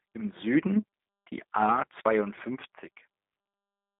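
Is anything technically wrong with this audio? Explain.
Yes. Throughout the speech there is G.729 codec damage, plainly audible. Nothing reaches above about 3.8 kHz, and the usable band sits between roughly 150 Hz and 3.7 kHz, which fits an 8 kbit/s G.729A telephone link. The codec does not store the waveform. It rebuilds each 10 ms frame from a vocal tract filter, a pitch predictor and a few pulses, so the speech comes out narrow, slightly rough and synthetic-sounding.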